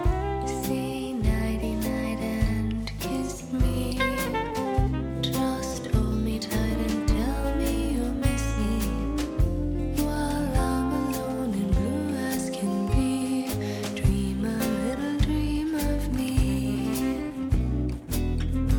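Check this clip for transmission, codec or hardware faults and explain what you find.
I hear no faults anywhere in this recording.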